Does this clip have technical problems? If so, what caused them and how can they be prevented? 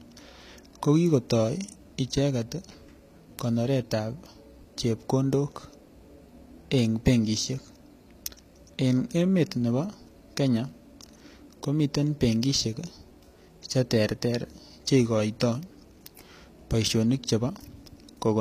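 Yes. The speech has two problems.

Throughout the clip the treble sounds synthetic, and the coding damage is plainly audible. S sounds turn gritty or metallic. The likely cause is HE-AAC compression at a low bitrate, which fits about 24 kbps. Only the lower spectrum is coded, and the upper bands are rebuilt by copying lower ones upward under a coarse envelope. On a spectrogram, nothing appears above 14.9 kHz, and the top region shows blocky, repeated patches whose harmonics don't line up with those below. Prevention: encode at a higher bitrate or use a full-band codec.

From 0.48 s to 17.95 s there are word clock ticks, roughly every half second and about forty in all. A receiver running on its own clock, not locked to the sender's, drifts by something like 50 parts per million. Each time the clocks slip past each other, one sample is dropped or repeated, producing a sharp tick. On the waveform each tick is a tiny step discontinuity. 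On a spectrogram it shows as a thin vertical line at regular spacing. Prevention: lock the receiving device to the incoming digital signal or a shared word clock.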